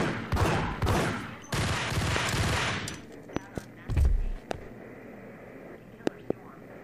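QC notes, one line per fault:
0.89–0.91 s, 2.16–2.19 s, 3.37–3.60 s (two pops), 4.51–4.53 s, 6.07–6.33 s (two pops): loud pop. Sharp thumps about 20 dB above the sound, likely a voltage step from a plug, switch or static discharge. Unlike a dropout, the sound continues uninterrupted underneath each pop.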